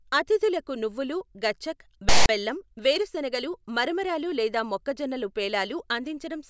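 At 2.09 s the speech is cut into by a sudden, hard-edged burst of loud, lopsided rasp that drops into dead silence before 2.29 s. This is file tags played as audio: a block of text tags and its zero padding was decoded as though it were samples.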